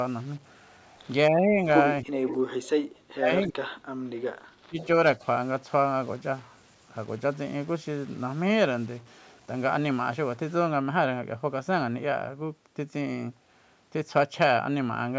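A speech recording from a call carries distortion from the start to 10.63 s, with noise filling the pauses, most likely a data bit stuck at one value in the converter or wiring. The voice dips or cuts out at 1.3–1.6 s (about 10 dB), 2.03–2.27 s (about 30 dB), 2.59–4.04 s (about 35 dB), 4.65–4.78 s (about 20 dB) and 5.19–5.23 s (about 5 dB). This is likely speech suppressed in double talk, where the echo canceller turned down both parties talking at once. Delayed repeats of the voice appear at 2.27–2.37 s, roughly 346 ms late and about 10 dB down, and at 4.8–4.86 s, roughly 352 ms late and about 20 dB down. These are likely echo leak from a loudspeaker whose canceller let some pickup through. The sound extends to 8 kHz, as the call's microphone processing passed it.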